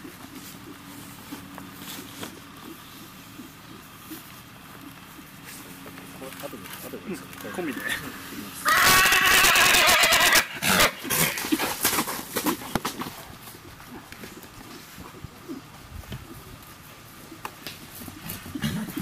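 Integer overflow wrapped peaks to the opposite sign instead of limiting them: about 7 dB over at 8.69–10.85 s, about 4–5 dB at 11.20–11.24, 11.85–11.87 and 12.76 s, heard as cracks.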